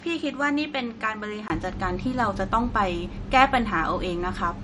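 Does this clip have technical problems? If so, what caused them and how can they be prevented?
Yes. Low-bitrate audio saved at a high bitrate: the spectrogram shows nothing above 11.2 kHz throughout, likely a 48 kbit/s MP3 re-encoded at 256 kbit/s. Always encode from the original source.

Input switched to a poorer device: from 0.0 to 1.5 s the band stops at 9.3 kHz, and the waveform is about 5 dB lower, with a 20 ms gap at 1.5 s. The likely cause is a mid-recording change to a worse microphone. Lock the input device before recording.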